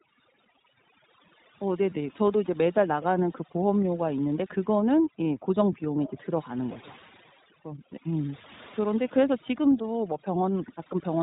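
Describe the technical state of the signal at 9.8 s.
One iLBC frame was lost from 9.82 to 9.85 s, and the decoder filled the roughly 20 ms gap by repeating the last pitch cycle with added noise. The result is a brief, slightly buzzy held vowel, and the speech recovers almost at once. Its length points to a single missing frame.

Beneath that, the speech passes through the iLBC codec. The cut at 4 kHz makes it narrowband, and the frame-by-frame excitation coding leaves it plainly rough and synthetic, which fits the 15.2 kbps mode.

Overdone noise removal is also at work. Bands near the estimated noise floor are pushed down hard, taking quiet parts of the speech with them. The background drops and breaks up into twinkling specks.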